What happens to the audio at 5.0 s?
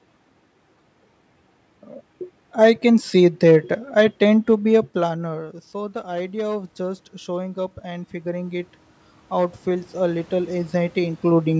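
Automatic gain rising, 4.52 to 8.73 s, after "I tend to": the input dropped about 17 dB, so gain climbs about 10 dB, swelling voice and background together in a gradually widening waveform.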